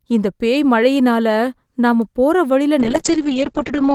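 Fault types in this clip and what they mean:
Bit error spike: A single sharp tick at 2.02 s, broadband and unrelated to the speech around it. One sample jumped by a power of two and immediately returned. A flipped bit in memory or on a digital link, lasting one sample, produces exactly this kind of isolated click.
Call bitrate drop: From 2.81 s to the end, the speech turns rough and watery and loses its brightness for about 1.1 s. The call's bandwidth estimate fell, forcing the encoder from 32 kbps down to 6 kbps and narrowing the audio from 20 kHz to 8 kHz.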